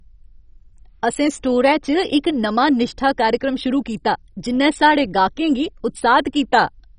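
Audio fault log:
throughout MP2 compression: the speech sounds dull, with a gurgling, granular distortion, likely from MPEG Layer II coding at a starved rate that fits about 32 kbps. A spectrogram shows nothing above 10.4 kHz and upper band blocks flickering on and off.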